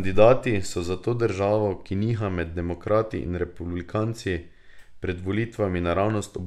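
No technical faults can be heard in this recording.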